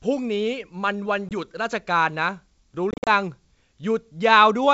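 Hard-edged silent holes cut the speech at 1.29 to 1.31 s (20 ms) and again from 2.91 to 3.09 s (130 ms across 160 ms, longest 50 ms), with the speech returning slightly distorted afterward. This is packet loss on an ADPCM call. The lost data leaves the G.722 decoder's adaptive predictor and step size mismatched until they resettle.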